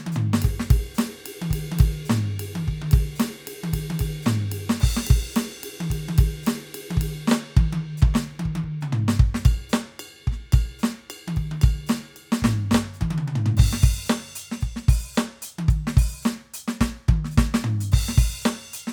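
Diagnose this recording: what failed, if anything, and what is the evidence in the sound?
Nothing failed here that I can hear: the music comes through without any problem pointing to a particular stage of the chain.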